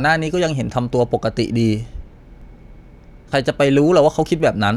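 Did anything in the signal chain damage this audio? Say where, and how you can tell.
Yes. The speech skips abruptly at 0.93, 2.42, 3.32 and 4.26 s with no gap of silence, most likely a dropped buffer (overrun) at the driver or buffer stage. About 10 ms vanishes at three points and roughly 40 ms at 3.32 s. The missing silence is what separates this from an underrun.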